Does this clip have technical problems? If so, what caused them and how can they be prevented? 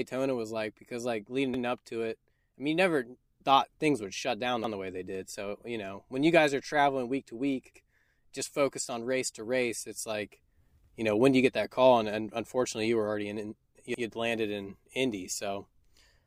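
Yes. The speech was handled in 3 s chunks, and each chunk began 100 ms before the previous one ended, producing overlapping chunks. At every join the last 100 ms is played twice, heard as a short stutter or click at 1.54, 4.64, 7.74, 10.84 and 13.94 s, a regular beat through the clip. Prevention: make each chunk start exactly where the previous one stopped, or crossfade and discard the overlap before playback.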